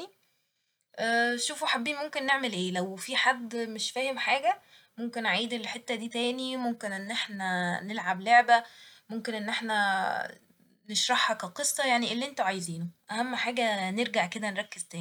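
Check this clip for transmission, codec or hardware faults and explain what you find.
Nothing to report: no transmission, codec or hardware faults can be heard anywhere in the speech.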